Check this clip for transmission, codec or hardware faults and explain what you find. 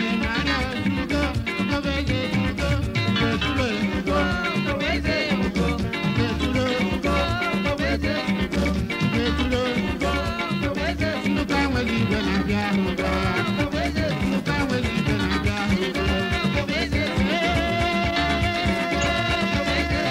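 Two short corrupt frames decoded, at 6.66 to 6.69 s and 18.98 to 19.02 s. In each, flipped bits in a few compressed frames were decoded as though valid, so misread gains and codes put energy at the wrong frequencies. Each lasts only a few tens of milliseconds and peaks around -20 dBFS, heard as a brief chirp, squeak, blip or burst of noise. Unlike a concealed lost packet, which sounds dulled, repeated or faded, these add new, unrelated energy.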